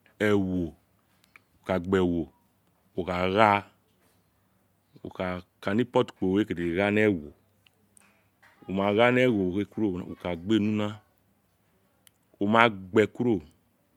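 Nothing goes wrong anywhere in this speech recording, so there's no technical fault to point to at any moment.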